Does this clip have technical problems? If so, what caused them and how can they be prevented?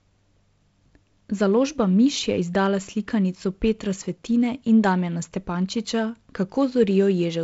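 No, nothing stood out as a technical problem on listening to this speech, so there is nothing to trace to a cause or prevent.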